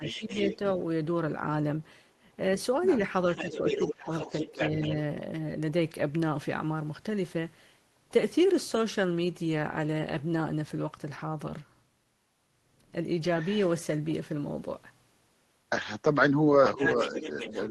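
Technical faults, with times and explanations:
0.00–0.47 s, 3.42–4.90 s and 16.77–16.81 s, speech suppressed in double talk: the talker's level dips and thins in short pieces, by about 10 dB early on (roughly a fifth of a second in all), by about 15 dB in the middle stretch (around half a second of chopping), and by only about 5 dB in a brief dip near the end. Each dip overlaps a second voice, so the likely cause is an echo canceller that could not tell near speech from loudspeaker echo and attenuated both.
0.06–0.57 s, 3.33–4.95 s and 16.66 s to the end, other side's voice leaking through: a second, fainter voice sits behind the talker, at about 10 dB down at the start and about 5 dB down in the later two stretches. This is likely far-end audio played on the talker's loudspeaker and picked up again by the microphone, with the echo canceller leaving part of it in. Its audible bandwidth tops out around 12 kHz, consistent with a low-bitrate call codec.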